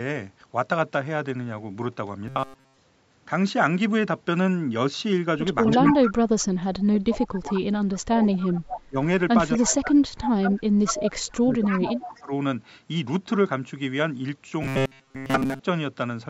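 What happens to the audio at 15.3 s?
At 15.3 s you're in a burst of robotic sound from repeated short buffers, 14.62 to 15.60 s: likely roughly 7.5 ms chunks looping in place of most of the audio, giving a rigid 134 Hz metallic buzz.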